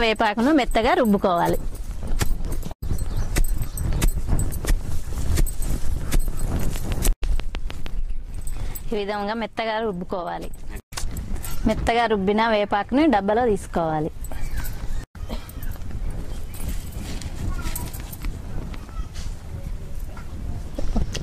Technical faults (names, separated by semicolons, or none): train of clicks